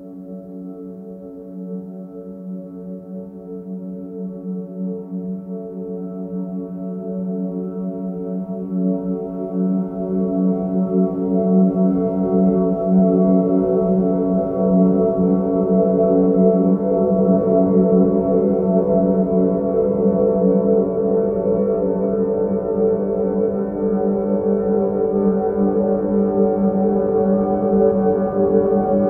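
Nothing in the sound stood out as a technical fault on listening.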